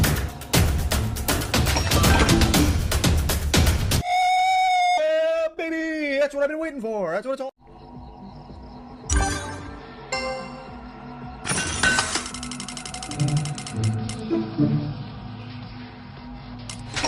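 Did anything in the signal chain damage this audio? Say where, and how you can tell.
Yes. At 4.97 to 4.99 s a skip ahead drops roughly a second of sound. The two sides join with no silence, unlike a dropout.

From 5.03 to 7.37 s a jitter buffer speed-up plays the sound at 119% speed at unchanged pitch by trimming pitch periods. Resampling would also raise the pitch.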